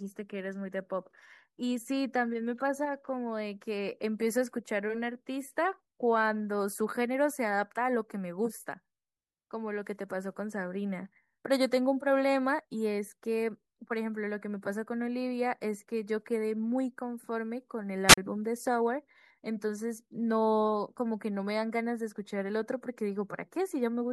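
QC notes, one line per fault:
18.07–18.18 s, wireless microphone squelch dropout: the RF carrier from the analogue FM transmitter weakens, so the receiver's demodulated output turns to rising hiss as the signal-to-noise ratio collapses. Once the carrier drops below the squelch threshold, the receiver mutes its audio, leaving a hole of near silence about 40 ms long. When the carrier recovers above threshold, the squelch reopens and the speech returns. The whole event spans roughly a tenth of a second.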